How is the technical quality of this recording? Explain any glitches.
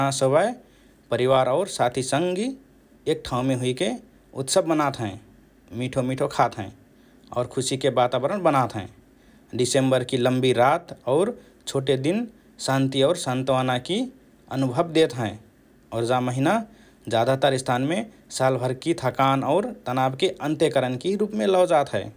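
No technical glitches can be heard in this recording.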